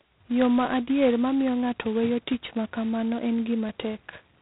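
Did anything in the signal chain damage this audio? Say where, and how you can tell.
Yes, at the codec: G.726 ADPCM damage throughout, with nothing above 3.9 kHz and a harsh rasping hiss tracking the speech level, which fits coarse 16 kbit/s prediction-difference coding.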